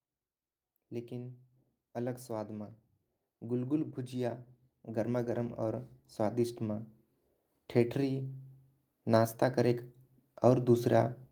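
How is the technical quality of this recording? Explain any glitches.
The recording is marred by automatic gain rising, heard three times: from 0.89 to 2.78 s (about 3 dB), 3.41 to 6.91 s (about 7 dB), and 7.73 to 9.87 s (about 3 dB). Each time the gain control judges the input too quiet and slowly turns it up, so the speech and the background noise swell together over one to three and a half seconds. On a waveform the envelope ramps steadily upward, and on a spectrogram every band, including the noise floor, brightens together.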